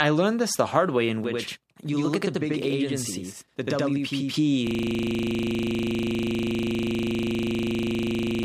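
From 1.24 s to about 4.34 s there's a channel delay causing doubling. One side of the stereo pair is running about 85 ms behind the other, which fits a 4096-sample buffer at 48 kHz. Once the two get folded down to mono, you hear the speech twice at equal level: a tight slap echo trailing each syllable, giving it that doubled-up quality rather than a roomy reverb.

Then at 4.67 s things lock up with a system hang loop that runs right to the end. The machine or its driver has frozen, but the audio hardware keeps spinning through the same 40 ms chunk of its ring buffer, repeating it exactly over and over. Because the piece is so short, it repeats 25 times a second, so instead of a stutter you get a steady, gritty buzz at 25 Hz where the speech should be.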